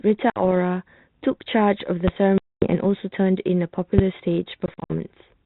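Packet loss on an ADPCM call strikes three times: from 0.30 to 0.43 s (60 ms gone, a few packets), 2.38 to 2.75 s (240 ms, around ten packets), and 4.66 to 4.93 s, where 140 ms drops out in scattered bursts across 240 ms, the longest lasting 60 ms. Each gap is a hard-edged silence, a flat line in the waveform and a blank vertical band on a spectrogram. Because the decoder's predictor and step size lose track of the sender's, speech resumes slightly distorted for some tens of milliseconds before settling. The G.726 path, which fits 32 kbit/s, audibly cuts off above 4 kHz.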